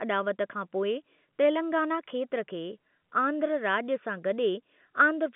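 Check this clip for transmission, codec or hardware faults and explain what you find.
No faults found.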